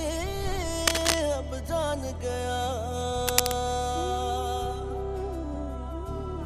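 A worn cable, connector or control was likely moved during recording, making its contact resistance change rapidly. Twice this is heard as cable scratch noise, dense, uneven crackling and rustling laid over the audio, from 0.87 to 1.20 s and again from 3.28 to 3.52 s. Each burst lasts about a quarter to a third of a second and sits roughly 5 dB above the sound it covers.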